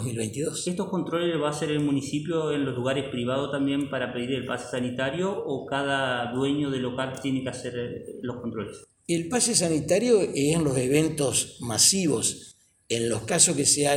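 No technical faults can be heard anywhere in this recording. Nothing in it calls for a timestamp or an explanation.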